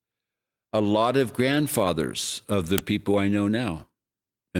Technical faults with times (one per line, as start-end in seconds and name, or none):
1.47-1.65 lost packet rebuilt from error correction
2.78 uninitialised buffer